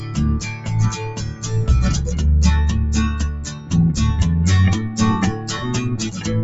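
Throughout, a noise suppressor applied to music or sounds treats held tones and tails as noise, so the level pumps by roughly 10 dB while attacks mostly get through. That is unlike a compressor, which follows loudness. The sound cut by the noise suppressor sinks by about 5 dB at 0.00 to 0.17 s, 0.49 to 0.69 s, 1.03 to 1.46 s and 3.34 to 3.72 s. Sustained parts fade or their decays shorten, rather than dropping out abruptly as a gap would.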